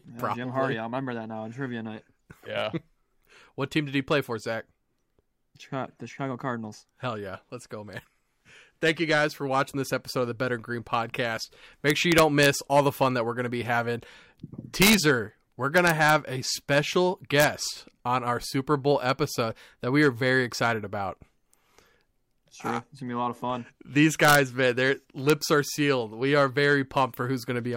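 Integer overflow at 11.90–12.46, 14.82–14.94, 15.78–16.10, 17.40–17.44, 24.25–24.35 and 25.30 s: speech peaks driven only about 0 to 1 dB past full scale wrapped to the opposite sign instead of limiting, producing violent, sharp cracks.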